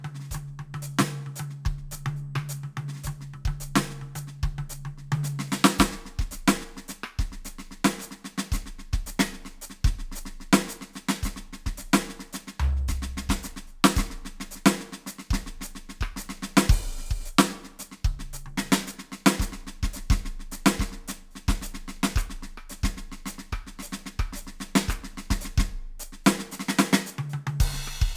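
A music clip with a gritty, metallic edge on its brightest content throughout, as if high partials had been replaced by harsh, off-pitch tones. This is aliasing. The audio was resampled to a lower rate without first filtering out content above the new limit, consistent with a drop from 48 kHz to 32 kHz. Everything above 16 kHz folds back below that point at unrelated frequencies, about 20 dB below the music, and the spectrum runs hard up to 16 kHz.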